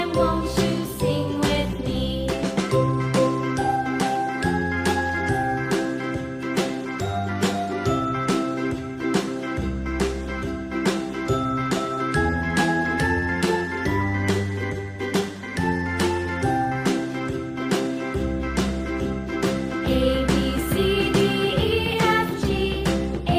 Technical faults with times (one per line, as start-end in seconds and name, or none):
none